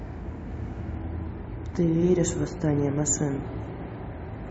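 At 0.95 s the adaptive stream switches to a lower bitrate and stays there to the end of the speech. The connection could no longer sustain the higher-quality version, so the player dropped to a leaner encoding, with a loss of detail that fits a fall from around 128 to 32 kbit/s MP3. The change is abrupt but leaves no gap, and compression artefacts rise.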